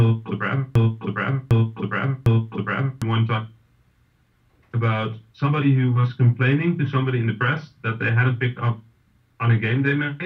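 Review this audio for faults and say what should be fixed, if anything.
From 0.0 to 3.02 s there is a broken-record loop. A 0.75 s fragment, already repeating when the clip opens, repeats back to back three times, and the audio that belonged in that span is lost. The likely cause is a stalled player, encoder or stream resending its last held fragment. To prevent it, add stall detection so the chain outputs silence or a clean dropout instead of recycling its final buffer.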